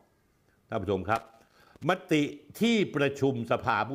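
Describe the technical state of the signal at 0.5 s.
At 0.5 s the speech signal is intact, with no audible fault at that moment.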